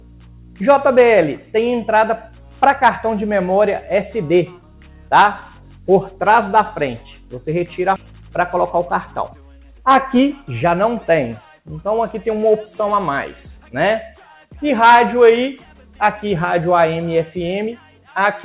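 At 7.96 to 7.98 s a skip ahead occurs: roughly 0.4 s of audio is dropped and the two sides are spliced with no gap, showing as an abrupt waveform discontinuity. From 8.06 to 10.33 s a jitter buffer speed-up trims short pitch-period pieces, about 0.2 s in total, so the sound runs at 109% speed at unchanged pitch. On a spectrogram the harmonics stay level while events crowd closer together, all under the 4 kHz ceiling of the G.711 A-law call path.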